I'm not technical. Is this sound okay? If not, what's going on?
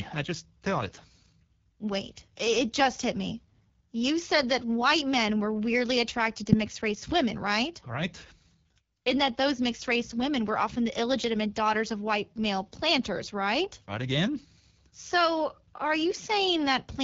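No. For the whole clip, the speech has gone through the AMR wideband (HD Voice) codec at a low setting, so it sounds rough and raspy. Unlike an old-style phone line, which sounds muffled, this keeps some brightness but with a hissy top.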